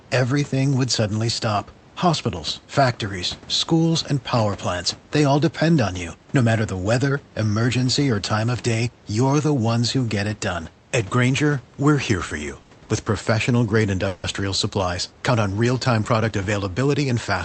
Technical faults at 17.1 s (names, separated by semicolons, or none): jitter buffer speed-up